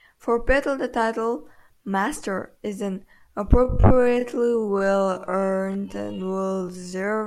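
From 3.62 s to the end, the speech runs at about 0.53 times its earlier pace while the pitch holds steady, a time-stretched section. The likely cause is software lengthening the audio by repeating short pieces, which leaves the slowed sound dragging.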